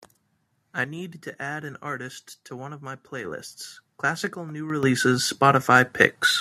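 At 4.83 s the speech and its background noise jump up together by about 10 dB in a single step: a microphone volume stepped up, where call software raised the input gain abruptly.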